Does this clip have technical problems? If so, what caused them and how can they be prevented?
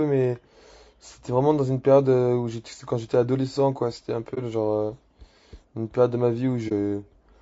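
Yes. Throughout the speech there is plainly audible coding damage. The voice sounds rough and grainy, with noise filling the gaps between harmonics and a thin, synthetic top end. The likely cause is low-delay AAC compression such as AAC-ELD. Its short frames resolve pitch harmonics poorly, and the damage fits a low bitrate of around 32 kbps. Raising the bitrate, or using a standard-delay codec where latency allows, would prevent it.

There are also two brief, soft-edged holes, from 4.34 to 4.38 s and from 6.68 to 6.72 s. Each lasts roughly 30 to 40 ms, consistent with one lost frame. This is AAC frame loss with muting. The decoder zeroed the missing frame's spectrum, and the overlapping windows faded the sound out and back in, so there is a gap. Better network protection, such as forward error correction, jitter buffering or packet-loss concealment, would prevent it.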